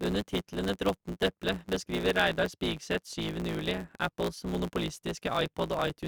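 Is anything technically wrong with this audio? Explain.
Yes. A block size mismatch (truncated) runs through the whole speech clip. One stage writes blocks longer than the next stage reads, so the tail of every block is discarded. The pattern fits 512-sample blocks. The regular cuts produce a buzz at about 109 Hz, and the speech plays 1.16 times fast while keeping roughly normal pitch. A waveform shows a splice discontinuity about every 9.2 ms, and a spectrogram shows evenly spaced vertical striations with harmonic lines at multiples of 109 Hz.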